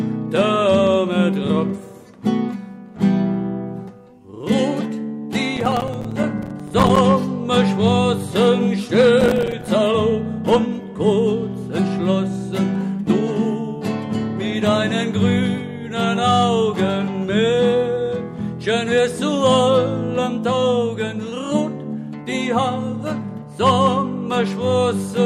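From 5.56 to 6.99 s and again from 9.21 to 9.68 s there is processor overload crackle. Dozens of tiny silent gaps fall in quick succession, which fits short buffers of around 5 ms missing their deadlines. Unlike clipping, the grit doesn't follow loudness and stops abruptly once the load eases.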